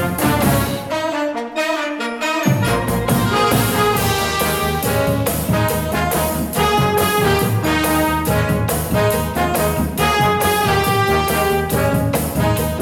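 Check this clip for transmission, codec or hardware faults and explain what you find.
No transmission, codec or hardware faults can be heard anywhere in the audio; the signal stays continuous and stable throughout.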